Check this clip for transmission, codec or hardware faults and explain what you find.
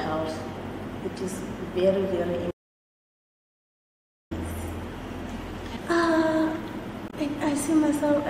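Two faults turn up here, one long and one brief.

From 2.51 to 4.31 s there's an audio dropout to silence: about 1.8 s of dead silence with no room tone, most likely from the input link or device briefly cutting out.

Then at 7.08 to 7.14 s there's damaged data in the compressed stream. Corrupt bytes throw the decoder off sync, so you get a short glitch while it hunts for the next frame.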